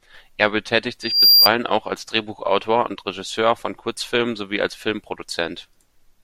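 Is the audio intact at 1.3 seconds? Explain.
No. Loudspeaker feedback squeal runs from 1.02 to 1.49 s, before "auch als". The microphone is re-amplifying its own loudspeaker, so a 4.8 kHz tone swells over roughly 0.3 s to about 10 dB above the speech, showing as a bright horizontal spectrogram line.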